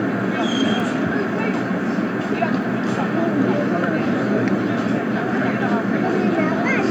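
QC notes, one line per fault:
0.80 s and 2.62 s: bit error spike. A flipped bit throws one sample, then two, off by a power of two and straight back: sharp ticks near about -15 and about -33 dBFS, seen as waveform needles and thin full-band spectrogram lines.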